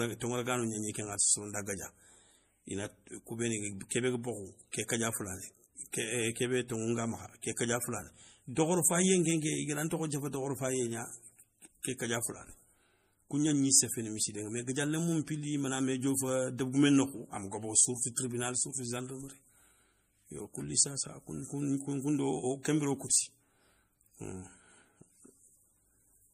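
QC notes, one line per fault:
Throughout: MP3 compression. The speech has a watery, swirling quality, and nothing remains above 15.1 kHz, which is likely a low-bitrate MP3 encode around 40 kbps. Short of bits, the encoder cuts the treble at a fixed point and drops weak frequency lines, which then flicker in and out from frame to frame.
4.72 s and 7.56 s: pre-echo. A brief hiss of about 18 ms and then 13 ms comes just before a sharp onset, softening its attack. The codec spreads quantisation noise across its whole block, so noise meant for the loud attack leaks into the quiet moment ahead of it.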